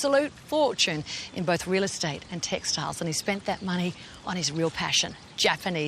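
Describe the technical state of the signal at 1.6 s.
At 1.6 s the signal is intact, with no audible fault at that moment.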